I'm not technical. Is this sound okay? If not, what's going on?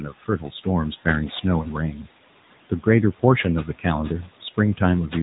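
No, it isn't quite right. Three things are going on.

First, there are noise suppressor artifacts the whole way through. Something tried to clean up the background by pushing down anything it judged to be steady noise, moment by moment. The room noise drops away between phrases and creeps back under the speech, so the background seems to breathe in and out.

Second, the sound went through the AMR narrowband mobile codec, the speech compression used on older 2G and 3G phone calls. It rebuilds speech from a simplified model instead of sending the real waveform, so the voice comes out buzzy and a bit synthetic, and you can plainly hear that. It also drops all the crisp top end, cutting off at around 3.9 kHz, which gives that boxy phone-line sound.

Third, there's speech cut by the noise suppressor in two places. Right at the start, from 0 to about 0.66 s, the suppressor mistook part of the speech for noise and turned down roughly a third of a second of it, quite heavily, so that opening sounds swallowed. 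A smaller dip comes at about 1.95 to 2.07 s, where around a tenth of a second goes faint. The room noise underneath is just the space the microphone was in.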